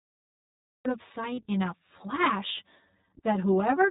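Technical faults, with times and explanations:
Throughout: channel delay (comb filtering). One channel arrives around 10 ms late and the two are summed to mono, so shared content cancels at evenly spaced frequencies, starting near 50 Hz and recurring about every 100 Hz. The result is a hollow, phasey colour on the speech.
Throughout: iLBC codec damage is plainly audible. Nothing above 4 kHz gets through, so the speech sounds narrowband, rough and slightly synthetic. Each frame's excitation is coded on its own, which fits 20 ms frames at the 15.2 kbps mode.
0 to 0.85 s: cut-off start. The audio sits in digital silence and then begins abruptly at 0.85 s in the middle of a sound, with no natural attack or fade-in, because the recording or stream began capturing late.
1.34 to 1.39 s: lost iLBC frames. About 40 ms, which fits two 20 ms frames, is missing. The decoder fills the gap by repeating the last pitch cycle mixed with noise, giving a brief held, buzzy sound. 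The speech recovers immediately because each frame is decoded independently.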